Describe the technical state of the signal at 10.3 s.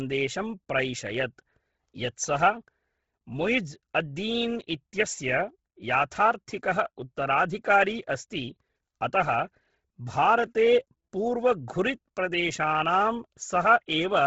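At 10.3 s the speech is sitting in heavy coding damage that runs through the whole clip: nothing above 7.7 kHz, and a breathy, grainy noise-filled top end. That's likely Bluetooth LC3 compression, which zeroes upper bands and patches them with noise, consistent with a low bitrate around 16 kbps.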